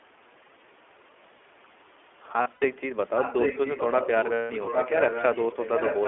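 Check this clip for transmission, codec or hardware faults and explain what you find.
Three faults stand out in the speech: iLBC coding throughout, two bursts of lost iLBC frames, and an echo leak in the second half.

iLBC codec, throughout: this narrowband VoIP codec codes each short frame's excitation on its own and keeps only about 300 Hz to 3.4 kHz, so the speech sounds muffled, slightly rough and synthetic. The plainly audible coding damage fits the 15.2 kbps mode with 20 ms frames.

Lost iLBC frames, 2.42 to 2.65 s and 4.34 to 4.52 s: packets went missing and the decoder filled each gap by repeating the last pitch cycle mixed with noise. The first loss totals 120 ms, scattered over about 200 ms, with the longest run around 70 ms. The second totals 160 ms. Both sound like a briefly held, buzzy vowel, and clean speech returns almost immediately afterwards.

Echo leak, 3.16 s to the end: a delayed copy of the speech trails it by about 0.81 s, only a little quieter than the original. 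The likely cause is a loudspeaker on one side whose echo canceller failed to remove what its microphone picked up, sending it back down the line.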